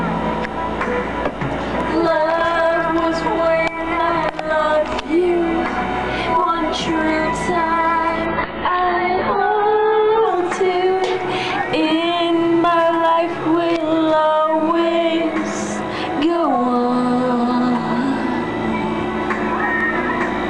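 From 8.26 to 10.26 s the audio suddenly loses everything above 4.8 kHz: an adaptive stream at a lower bitrate, switching seamlessly, unlike a dropout's gap.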